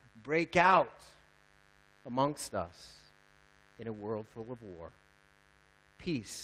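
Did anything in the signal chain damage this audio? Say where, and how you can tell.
Yes. A steady, raspy buzz sits under the speech for the whole clip, well down, around 35 dB below it. This is mains buzz picked up in the analogue wiring: sharp switching spikes locked to the 50 Hz supply, spraying harmonics of 50 Hz up into the kilohertz range.

At the network and codec stage, the sound turns briefly rougher and noisier without any gap: a 20 ms patch at 2.27 s and a 40 ms stretch from 4.23 to 4.29 s. These are lost packets rebuilt from error correction. The decoder played the low-bitrate copies carried in following packets, and the longer stretch fits two separate losses.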